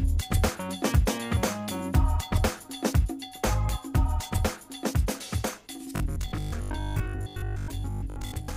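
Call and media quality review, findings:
Robotic sound from repeated short buffers, 5.96 to 8.56 s (end of clip). Rigid metallic buzz at 50 Hz, so a 20 ms segment is being looped. About half the audio is repeats, with real audio skipped. Likely cause: receive buffer underrun, with the concealment replaying the last block.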